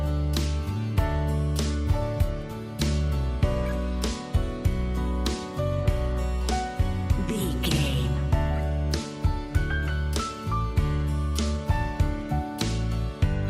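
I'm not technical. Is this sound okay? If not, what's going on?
Yes, this one's fine: nothing in it sounds broken or glitchy, so there's nothing going wrong to worry about.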